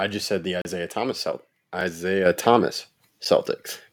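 Right after "just said the", at 0.62 to 0.65 s, there's a 35 ms block of digital silence: the output buffer likely wasn't filled, so the speech drops out. Shorter ones at 1.81 s and 3.25 s just tick. At 2.26 s the microphone volume steps up by about 6 dB, so voice and background jump together.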